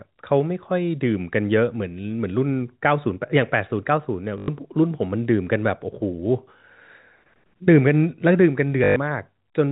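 At 4.38 to 4.48 s and again at 8.84 to 8.96 s, packet loss with the last packet repeated fills 100 ms and then 120 ms of missing speech, which fits runs of 20 ms packets. Each gap becomes a robotic stutter buzzing near 50 Hz.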